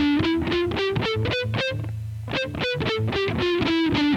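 Listening to this recording of sounds, nothing stood out as a technical problem.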